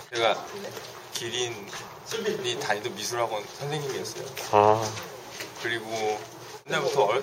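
Nothing stood out as a technical problem on listening to this audio.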